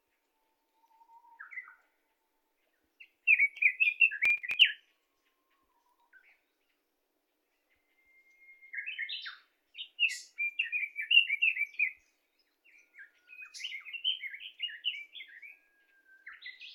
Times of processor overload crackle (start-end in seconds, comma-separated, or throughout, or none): 4.19-4.61